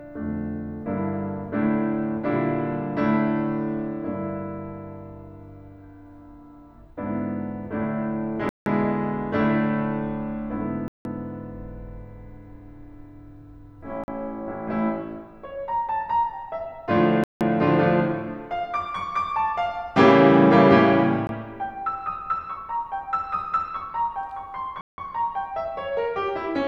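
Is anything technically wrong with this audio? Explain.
Yes, the music drops out in blocks of digital silence at 8.49–8.66 s, 10.88–11.05 s, 17.24–17.41 s and 24.81–24.98 s (each about 170 ms), 14.04–14.08 s (43 ms) and 21.27–21.29 s (20 ms). The output buffer most likely went unfilled and was zeroed, which fits whole buffers being lost. Each gap cuts in and out with no fade. On a waveform it shows as a flat line, and on a spectrogram as a blank vertical band edged by broadband streaks.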